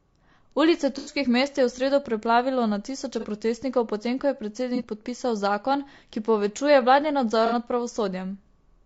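The speech sounds rough and grainy throughout, with noise between the harmonics and a synthetic top band, likely from low-delay AAC compression at a low bitrate, consistent with about 32 kbps. Short smeared, noisy patches at 0.98 to 1.12 s, 3.20 to 3.25 s, 4.76 to 4.81 s and 7.46 to 7.55 s come from AAC frame loss with concealment, where 30 to 90 ms of audio was rebuilt from the last good spectrum.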